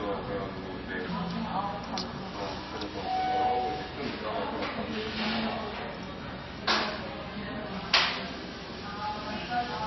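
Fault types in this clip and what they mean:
MP3 compression: nothing remains above 5.8 kHz, and a plainly audible watery swirl runs throughout, unlike a clean low-pass; this fits likely MP3 encoding near 24 kbps.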